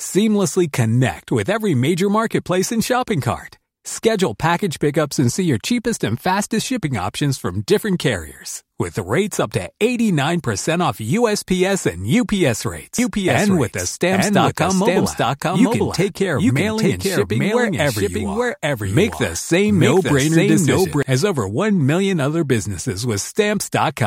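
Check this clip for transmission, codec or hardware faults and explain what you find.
One fault stands out, a doubled audio track from 12.99 s to 21.03 s. The speech is heard twice, the second copy trailing about a second behind at roughly equal loudness, full-band and dry, cutting in and out abruptly. It is likely caused by a second, slower capture path or an edit leaving two offset copies mixed together.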